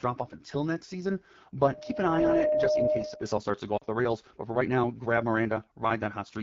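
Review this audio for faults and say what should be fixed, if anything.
The whole clip carries AMR wideband (HD Voice) codec damage. The speech sounds rough and raspy throughout. That grain comes from the pulse-driven vocal tract model working with very few bits, which fits the 8.85 kbit/s mode. Prevent it by allowing 12.65 kbit/s or higher.

Lost AMR speech frames cut in from 3.77 to 3.84 s, right after "starts to go" and before "the rails". The decoder repeats the last good settings with falling gain, so the sound drops to near silence within two frames. The 40 ms gap fits two lost frames. Prevent it with better radio coverage or stronger error protection.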